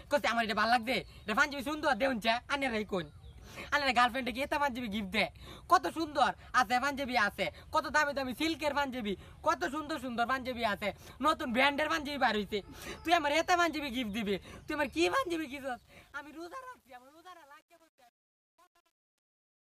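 The audio fades out from about 15 s to 19.7 s, and from 15.09 s to the end that fade carries truncation distortion: the level stage drops bits without dither, fitting a 9-bit word length. From 15.73 s the tail turns gritty. Unlike a gentle hiss of dither, this grit tracks the sound itself.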